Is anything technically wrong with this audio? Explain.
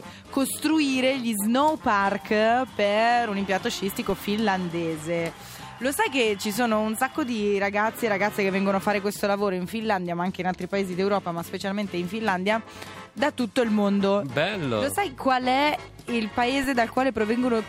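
Yes. A DC step at 4.10 s and again at 16.64 s shifts the waveform's zero line by about -24 dBFS, then decays through a 20 Hz high-pass, giving a low thump each time.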